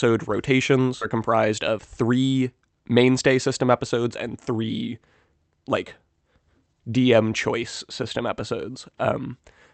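At 1.01 to 1.03 s the speech jumps forward with no gap at all, and roughly 0.7 s of audio is simply missing, its two sides butted together. This is a skip ahead: a stretch of audio was discarded while later audio was already queued, so playback leapt past it.

From 1.11 to 2.42 s, just before "mainstay system episodes and", the speech sounds hurried, about 9% faster, with its pitch unchanged. This is a jitter buffer speed-up: with too much audio waiting, the receiver repeatedly trimmed short pitch-period pieces, about 150 ms in total, to catch up.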